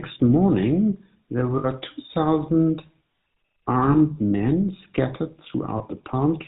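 From the first moment to the last, the speech carries the buzzy, gravelly grain of the GSM full-rate codec, and it's plainly audible. That codec rebuilds the voice from a vocal-tract model fed by a sparse train of regularly spaced pulses, keeping just one excitation sample in three, so the texture turns rough and reedy. Nothing above 4 kHz survives, which fits the 13 kbps full-rate mode.

There are three spots where lost GSM frames show up. The first runs from 1.58 to 1.65 s, about 60 ms, enough for the decoder to hold the last good frame's settings and repeat them. You hear a short, metallic ring smeared over that stretch before the voice picks back up. The other two are briefer, at 3.92 to 3.96 s and 5.78 to 5.82 s, each about 20 ms of the same repeated-frame substitution, so they come across as quick, rough, metallic rings.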